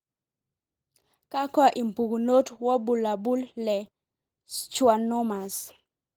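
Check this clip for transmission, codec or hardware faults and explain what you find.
No transmission, codec or hardware faults found; the speech passes through Opus at 20 kbps in hybrid mode with fullband bandwidth and content reaching about 20.3 kHz, and the coding leaves only light traces.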